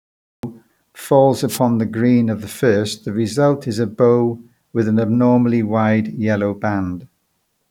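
The clip opens on dead digital silence, and at 0.43 s speech bursts in already mid-sound, with no natural attack or lead-in. This is a cut-off start: capture began late, so the opening of that sound was never recorded.

From 1.48 to 1.59 s, just before "the green of the", a brief swish of static washes over the speech for about a tenth of a second. This is a wireless microphone noise hit: the FM radio link faded momentarily as reflected signals cancelled, letting receiver noise surge up.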